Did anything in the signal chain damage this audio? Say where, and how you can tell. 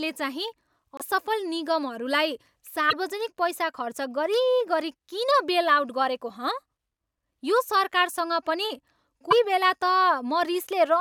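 Yes, at the codec stage: brief glitches at 0.97–1.01 s, 2.89–2.93 s (just before "पैसा खर्च गरिगरि") and 9.30–9.33 s, each a jump in the speech lasting about 30–40 ms, against a 24 ms frame. This is likely a broken MP3 bit reservoir, where frames after a dropped one decode from the wrong data, showing as broadband smears or gaps and waveform discontinuities.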